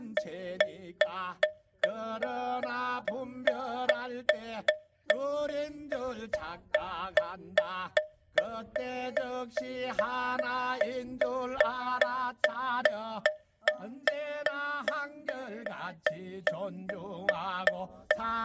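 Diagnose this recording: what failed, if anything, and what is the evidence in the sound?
Nothing failed; no faults heard.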